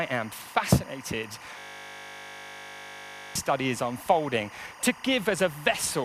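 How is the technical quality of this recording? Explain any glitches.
The recording has two clear technical faults: a continuous interference tone and a brief lock-up.

Timecode bleed runs throughout: a chirping warble alternating near 1 and 2 kHz, consistent with 24 frame/s linear timecode leaking in roughly 20 dB below the programme.

A system hang loop occurs from 1.59 to 3.35 s: a 20 ms slice of the buffer repeats about 88 times, producing a steady 50 Hz buzz.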